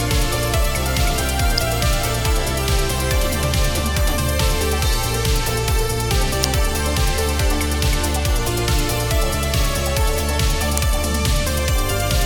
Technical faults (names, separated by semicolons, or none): electrical switching spike